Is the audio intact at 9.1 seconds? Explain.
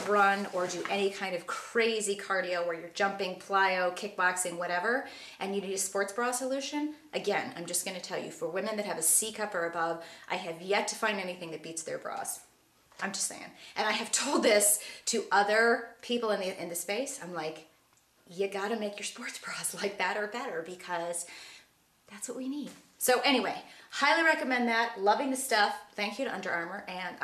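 Yes, the audio at 9.1 seconds is intact, with no dropout, click, distortion or other fault to be heard at that point.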